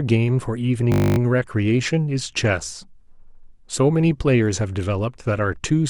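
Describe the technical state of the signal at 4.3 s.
The signal at 4.3 s is intact, with no audible fault at that point in the speech.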